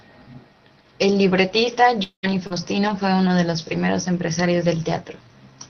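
Around 2.03 s the sound stalls. The last bit gets stretched into a buzzy tail that fades to near silence, and normal audio picks up again at about 2.25 s with roughly a fifth of a second gone. That's most likely a long network dropout.

Right at the end of that gap, from 2.23 to 2.25 s, there's a lost packet rebuilt from error correction. The decoder played the low-bitrate backup copy carried in the next packet, so there's no hole, just a rougher, noisier 20 ms patch.

From 2.47 to 2.52 s comes a short concealed packet loss. About 40 ms never arrived in time, so the receiver carried the preceding sound forward and blended back in. You hear a brief smear rather than a clean gap.

More rebuilt-from-error-correction packets follow at 2.50–2.52, 2.56–2.58, 2.76–2.78 and 2.88–2.90 s. Each is a grainier 20 ms stretch. The whole call already tops out around 6 kHz from the Opus path, so the roughness shows up as added noise rather than lost treble.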